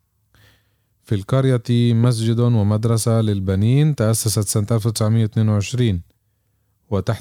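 At 2.04 to 2.06 s, a single loud pop, roughly 10 dB above the speech, cracks over it. This is likely a brief voltage spike entering the signal chain.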